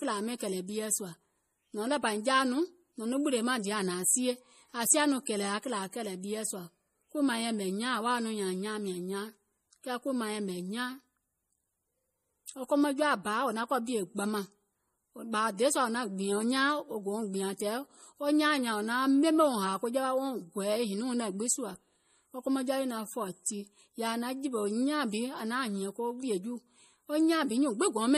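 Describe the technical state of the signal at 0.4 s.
Pre-echo runs from 0.38 to 0.40 s: codec noise smeared 26 ms ahead of a sharp attack, heard as a brief hiss and seen as a haze before the waveform's onset. Throughout, the sound is watery with nothing above 15.1 kHz, likely MP3 compression at a low bitrate near 40 kbps, which leaves a flat spectrogram ceiling and flickering gaps.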